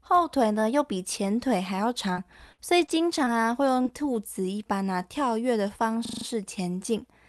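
Repeated packet loss (robotic sound) affects this speech recording from 2.13 to 3.87 s. Five separate holes open in the stream, the longest 54 ms, adding up to about 140 ms of missing audio. Each one is papered over by stretching the last received sound, so around 150 ms of the span is rebuilt rather than real. The fills arrive in quick succession, giving a choppy texture with fragments dropped out. A system hang loop follows from 6.05 to 6.25 s. The machine stalled while the audio hardware kept replaying its ring buffer, so a single 40 ms slice repeats exactly five times. At a 25 Hz loop rate it comes across as a rapid mechanical stutter, and little if any audio appears to be lost. Underneath both faults, the coding noise and the top end rolling off near 12 kHz point to an Opus call path at a moderate bitrate.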